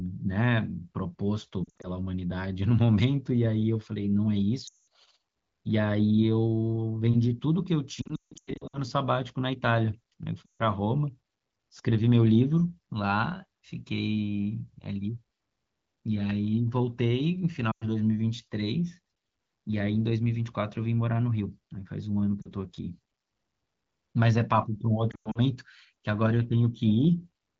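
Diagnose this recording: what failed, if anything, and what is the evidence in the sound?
Brief dips, warbles and drops to near silence occur at 1.64–1.88, 4.67–4.79, 8.02–8.80 (worst, runs up to 160 ms), 10.46–10.62, 17.71–17.85, 22.42–22.50 and 25.11–25.38 s. These are lost AMR speech frames on the radio link. Corrupted frames failed their checks, so the AMR-WB decoder replayed the last good pitch and vocal-tract settings with falling gain.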